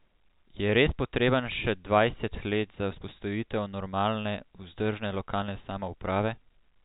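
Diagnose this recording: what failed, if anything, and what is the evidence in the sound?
Nothing failed: the speech sits in the ordinary narrow telephone band of G.711 coding, with the faint level-following quantisation noise that format always carries, and no stage of the chain shows a fault.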